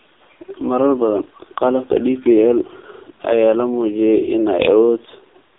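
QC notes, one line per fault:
Throughout: AMR narrowband mobile codec, heavy damage; nothing above 3.8 kHz, buzzy synthetic speech, which fits about a 5 kbps rate, unlike plain band-limiting.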